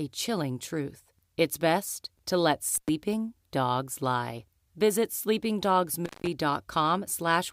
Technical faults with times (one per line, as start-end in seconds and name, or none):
2.75-2.89 intermittent contact
6.05-6.27 intermittent contact